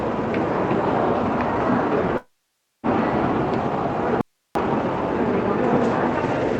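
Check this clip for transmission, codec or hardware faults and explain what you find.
Two faults stand out, both interruptions of the sound. The rest of the band sits under a ceiling near 8 kHz, as expected from an Opus call path at 32 kbps.

From 2.17 s to 2.86 s there is what is most likely a long network dropout. About 0.66 s of audio never arrived. The receiver stretched the last sound into a fading tail of buzz or hiss, and then about 0.54 s of near silence follows before the audio resumes further on, with that stretch missing. On a spectrogram this shows as a smeared, decaying continuation of the previous spectrum, then an almost blank band. The waveform shrinks to a flat line before the level jumps back.

From 4.21 s to 4.55 s comes an audio dropout to a faint residue, lasting 0.34 s. The signal cuts off abruptly mid-flow while the path stays live, so only hiss remains, about 50 dB below the normal level. 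The likely cause is a brief loss of the source feeding a still-active input. The spectrogram shows a sharp-edged gap filled with faint, even broadband noise. The waveform drops instantly to a thin noise floor and snaps back, with no fade at either edge.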